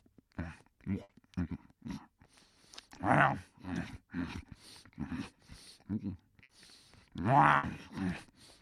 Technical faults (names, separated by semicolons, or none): burst of packet loss